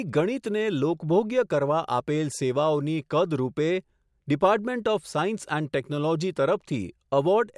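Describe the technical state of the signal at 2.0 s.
At 2.0 s the speech signal is intact, with no dropout, clipping, glitch or other fault audible at that moment.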